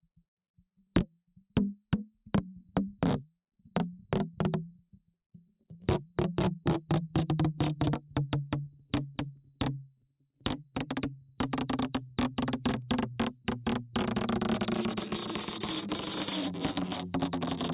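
No technical faults are audible.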